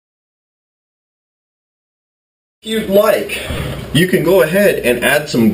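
Lost LE Audio frames, from 3.43 to 3.59 s: short dropouts totalling about 90 ms are scattered across a 160 ms stretch, with the longest gap only around 30 ms. That pattern suggests roughly nine 10 ms frames went missing. For each gap, the LC3 decoder refilled the hole by repeating the previous spectrum with scrambled signs. Any tonal content in the sound turns into a brief noisy smear, and because the runs are short it never fades to silence.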